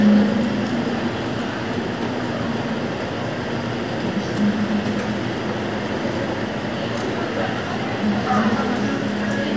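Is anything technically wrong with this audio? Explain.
No, nothing technically wrong can be heard in this recording of sounds; the signal holds together as it should throughout.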